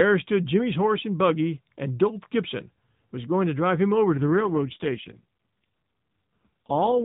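An AMR rate drop hits this speech recording at 4.1 s, right after "going to drive him", and lasts to the end. The mobile link forces the AMR narrowband codec down from its normal mode to a much leaner one, trading speech detail for error protection, which fits a fall from 12.2 to 4.75 kbps. The band stays telephone-narrow and nothing drops out, but the voice turns audibly buzzier and more synthetic than the lightly coded opening.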